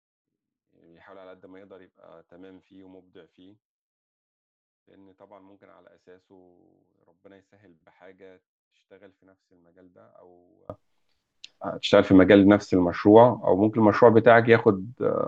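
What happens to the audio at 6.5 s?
At 6.5 s the speech is in the middle of a span from 0.0 to 10.70 s where it collapses to a faint residue about 32 dB down. The likely cause is one channel inverted: with one side's polarity reversed, the centred speech and low end cancel when the channels sum to mono, leaving only their small differences. A plain level drop or dropout would sound different, giving either a quieter but complete voice or true silence, not this faint remnant.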